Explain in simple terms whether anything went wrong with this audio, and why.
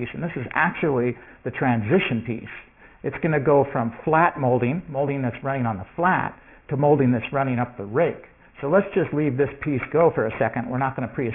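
Aliasing runs through the whole clip. The audio was squeezed down to a much lower sample rate, which fits a rate of 6 kHz, without first removing sounds above 3 kHz. Those high sounds fold back below 3 kHz as wrong, unrelated pitches, giving a gritty, metallic edge.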